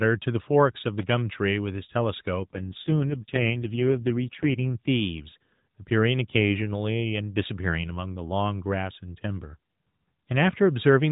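Speech heard through a narrowband mobile codec, with nothing above 4 kHz, has two faults. A loose connector crackle from 0.98 to 1.08 s appears as a ragged burst of sharp spikes in the waveform and broadband vertical streaks on a spectrogram. From 2.4 to 4.7 s an AMR rate drop makes the voice rougher and more synthetic, which fits a fall from 12.2 to 4.75 kbps. The 4 kHz ceiling holds, with no gap.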